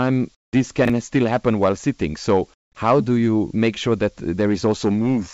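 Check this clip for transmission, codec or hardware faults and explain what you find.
Three kinds of fault turn up in this speech: two stretches of comfort noise, one clipped onset, and one out-of-order chunk. The call path's G.722 coding, with nothing above 8 kHz, is heard alongside them.

Comfort noise in place of the background, 0.35 to 0.53 s and 2.54 to 2.75 s, the second just before "how do you make". The sender most likely stopped transmitting during pauses, and the receiver filled them with synthetic noise. The real background gives way to a flat, featureless hiss, about 39 dB quieter in the first gap and about 16 dB quieter in the second.

Onset clipped by the voice detector, 0.47 to 0.53 s. The detector was likely slow to register that sound had resumed, so the first 60 ms went unsent and comfort noise covered them. The sound then begins abruptly, without its soft lead-in.

Chunks out of order, 0.85 to 0.90 s, just before "still happen while sitting". 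A 21.33 ms chunk played one chunk late, after the audio that should follow it. Nothing is missing, but the swapped order creates hard joins, heard as a brief jumbled moment.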